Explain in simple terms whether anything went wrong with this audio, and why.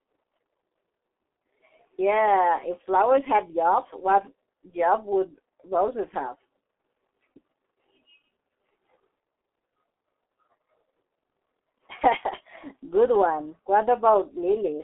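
The speech sounds muffled and hoarse from start to finish, as if heard over an old phone line, and consonants come out smeared. That is damage from the G.723.1 codec, an early internet-telephony compression scheme. It keeps only a narrow phone band, roughly 250 Hz to 3.5 kHz, with nothing above about 3.8 kHz, and it rebuilds the voice from a coarse model updated in chunks, so fine detail is lost.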